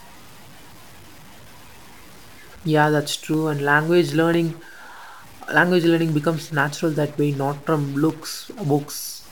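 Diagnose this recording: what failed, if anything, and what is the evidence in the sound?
Distortion runs through the whole speech clip and hiss fills the pauses, likely a stuck converter bit. Clipping would leave quiet passages clean.

Periodic USB or driver dropouts at the driver stage: ticks every 0.25 s from 2.59 to 9.10 s, each a sub-millisecond silent gap. Their fixed spacing rules out random network loss.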